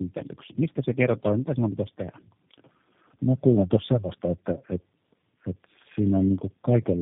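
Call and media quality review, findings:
Tandem speech coding, whole clip: call passed through G.729A at 8 kbit/s three times, with G.711 A-law legs between, each hop decoding and re-encoding prior output. Speech rough, muffled, warbly, nothing above 3.7 kHz; damage compounds beyond any single codec.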